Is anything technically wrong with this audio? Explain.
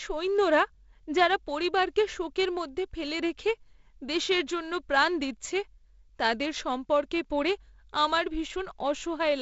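No, nothing is wrong: this is speech carried over G.722 wideband telephone coding, with a band limit near 7.7 kHz and the light upper-band hiss that coding leaves, and no fault.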